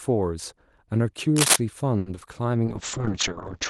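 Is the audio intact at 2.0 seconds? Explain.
No. From 1.98 to 2.07 s the speech catches on a single sound and holds it for about 80 ms, with a faint buzz or slight dip, before carrying on exactly where it stopped. This is a short stall from a late packet. The next packet missed its playout time, the jitter buffer ran dry, and the receiver stretched the last sound to bridge the gap. No speech is lost, but everything afterward plays about 80 ms later.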